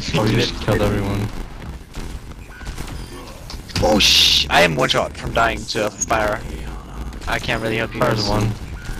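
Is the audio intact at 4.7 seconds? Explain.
No. At 4.7 seconds, as throughout the clip, a steady buzz of about 86.1 Hz rides on the sound, which also runs slow at 0.861 times normal speed. This is block size mismatch (padded): each block, consistent with a 512-sample read, arrives short and is zero-filled, leaving a gap at every block.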